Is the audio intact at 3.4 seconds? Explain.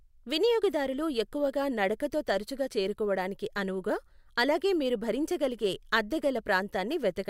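Yes, at 3.4 seconds the speech plays through intact, with no dropout, click, distortion or other fault to be heard at that moment.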